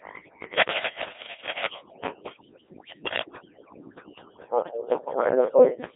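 Throughout the speech, overdone noise removal has pushed the background down with twinkling specks, and quiet parts of the voice drop out with it. Running the whole length is Codec 2 vocoder damage: the voice is rebuilt from sine waves, sounding robotic and buzzy, confined to about 300 Hz to 3.6 kHz, with nothing above 3.8 kHz, which fits roughly 1.6 kbit/s.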